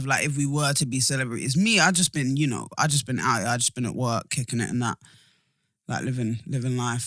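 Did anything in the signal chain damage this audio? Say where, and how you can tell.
No, nothing in the signal chain damaged this audio.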